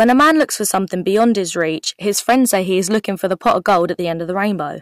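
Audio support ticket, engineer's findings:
Hard clipping, throughout. Speech peaks driven about 9 dB past what a gain stage or converter can pass, so roughly 2% of samples are cut flat. The flat tops add high harmonics, heard as crackle on louder syllables.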